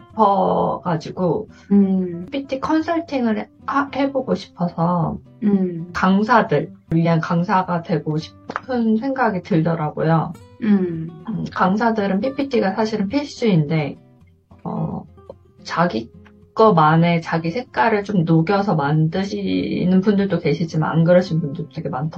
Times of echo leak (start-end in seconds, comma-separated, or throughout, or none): none